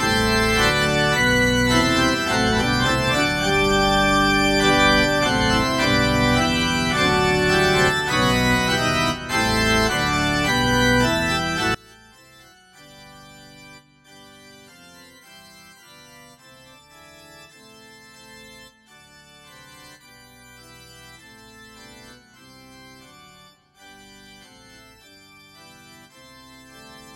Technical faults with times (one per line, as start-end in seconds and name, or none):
11.74-27.15 one channel inverted